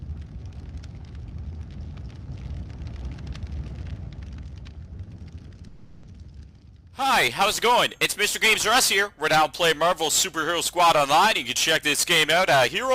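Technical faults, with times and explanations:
5.67–6.05 s, long network dropout: incoming audio likely stopped for about 0.4 s; the receiver filled it with a fading buzz or hiss, and the lost part never returns.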